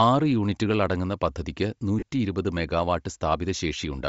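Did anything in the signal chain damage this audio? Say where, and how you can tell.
Yes. At the codec stage, Bluetooth LC3 compression is the likely cause of damage heard throughout the speech. The upper spectrum sounds thinned and refilled with noise, giving a breathy, grainy edge. The damage is plainly audible, which fits a low bitrate near 32 kbps.

At the wireless transport stage, lost LE Audio frames cause a dropout from 1.99 to 2.03 s, right after "ആറ് യൂണിറ്റുകൾ അടങ്ങുന്ന പദ്ധതിക്ക്". The gap lasts about 30 ms, which fits four 7.5 ms frames. The decoder repeats the last spectrum with scrambled phase, so the sound turns into a brief noisy smear.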